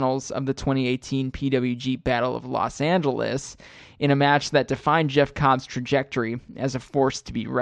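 No technical faults can be heard anywhere in this speech recording. There is nothing in the audio that needs a timestamp or an explanation.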